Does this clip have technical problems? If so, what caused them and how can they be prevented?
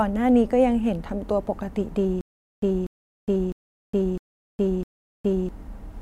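Yes. From 2.21 s to 5.49 s the speech falls into a stutter with silent gaps: a 242 ms fragment plays, then about 414 ms of digital silence, repeating on a steady 656 ms cycle five times. The likely cause is a stalled player or stream that replays its last buffered fragment at each retry before running dry, so the intended audio in that stretch is lost. Adequate buffering and a stable network or disk path prevent it.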